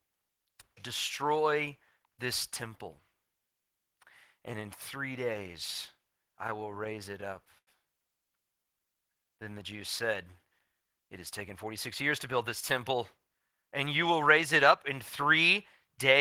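From 6.47 to 7.69 s the speech breaks into repeated stalls (stutter). Packets kept arriving late, so the jitter buffer ran dry ten times, and the receiver stretched the last sound to fill each wait, 176 ms in all, with the longest hold lasting 90 ms. Nothing is lost, but the speech drags and hiccups. On a spectrogram the stretch shows short, flat, repeated bands where harmonics freeze in place. In the waveform, some of these holds visibly taper in level.

Between 8.63 and 9.55 s comes a jitter buffer slow-down. The buffer was running short, so the receiver repeated single pitch periods over and over to rebuild its reserve, adding 100 ms and playing the passage at 90% speed. Pitch stays the same while sounds are drawn out, giving a sluggish quality. On a spectrogram the harmonics keep their spacing but stretch horizontally. The waveform shows near-identical periodic cycles repeated back to back.

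From 12.80 to 13.72 s a jitter buffer speed-up occurs. The buffer held more audio than it wanted, so the receiver trimmed short pitch-period slices repeatedly, removing about a tenth of a second and running the speech at 109% speed. The pitch is unchanged, but delivery sounds rushed. A spectrogram shows harmonic tracks compressed in time, with syllables packed closer together. In the waveform, periodic segments look shortened, with small seams where cycles were spliced out.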